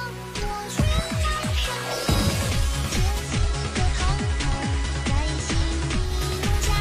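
At 3.18 s the audio shows digital radio blending to analogue: the receiver loses the digital stream and cross-fades over 133 ms to the station's FM broadcast. Hiss rises to roughly 25 dB below the signal, and level stays constant until the return blend at 6.14 s.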